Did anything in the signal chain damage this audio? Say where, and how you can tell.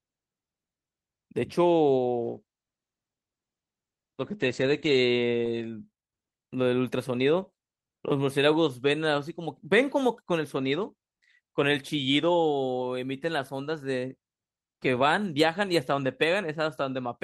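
Yes, at the call codec: a call bitrate drop from 2.22 to 5.51 s. The speech goes rough and watery and loses its top end for nearly 3 s, which points to Opus starving from about 32 to 14 kbps and narrowing its coded band.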